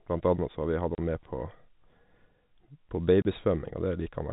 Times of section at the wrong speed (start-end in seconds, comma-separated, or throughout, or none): none